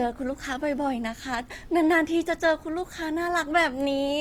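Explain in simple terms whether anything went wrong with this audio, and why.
The speech sounds grainy and rough from start to finish, with a noisy edge. The likely cause is Opus compression squeezing the audio into too little data.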